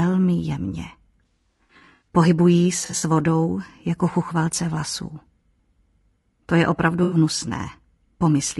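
All the way through, the speech has a rough, grainy texture, with noise filling the gaps between harmonics and a top end that sounds thin and a bit synthetic. That's plainly audible codec damage, most likely from low-delay AAC compression (AAC-ELD) at around 32 kbps. The short frames it uses can't resolve pitch harmonics cleanly, and at that bitrate there aren't enough bits to cover the gaps.

On top of that there's AAC frame loss with concealment in three places. The decoder patches each missing stretch by reusing the last good spectrum, so you hear smeared, noisy, slightly phasey bits instead of clean speech. The worst is from 1.25 to 2.08 s, where about 420 ms of audio drops out in bursts spread over 760 ms, with runs up to about 70 ms. Next is 2.85 to 3.03 s, with about 100 ms lost over 160 ms. The last is 7.03 to 7.17 s, about 80 ms, which fits roughly four 20 ms frames going missing.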